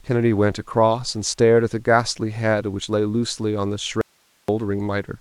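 At 4.01 s the speech drops out abruptly for about half a second, leaving only faint hiss around 40 dB down, likely a dropout with the path still live.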